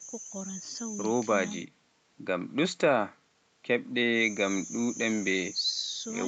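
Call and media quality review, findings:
No faults found in this speech.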